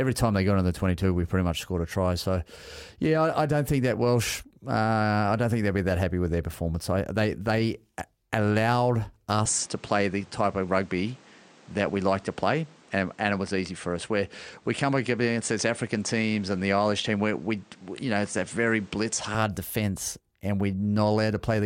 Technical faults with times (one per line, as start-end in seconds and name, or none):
9.46-19.35 input switched to a poorer device